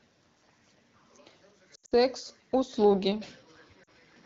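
From 1.75 to 1.94 s, lost AMR speech frames break up the speech: about 140 ms of audio is missing, scattered over 160 ms, with the longest gap around 80 ms. Over each gap the decoder stretches the last good pitch and vocal tract settings and fades them out, so the sound smears and warbles rather than cutting to a hard silence.

At 2.76 s the sound turns duller and more boxy, with nothing above 5.8 kHz. There is no gap at the change, the level shifts by a few decibels, and a faint new noise floor appears well below the speech. The likely cause is the input being switched to a poorer device. This differs from the AMR wideband coding, which stays light at 12.65 kbit/s and would not narrow the band partway through the clip.

At 3.83 to 3.90 s, after the switch, a second burst of lost AMR speech frames drops about 40 ms. It gives a brief dip and warble, and the speech comes back weak or rough for a moment.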